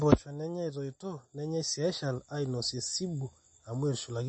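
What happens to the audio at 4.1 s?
The speech sounds watery and swirly, with s sounds turned metallic and nothing above about 8.3 kHz, as across the whole clip. This is likely MP3 compression at a low bitrate, around 32 kbps, where the encoder drops treble and weak frequency lines flicker between frames.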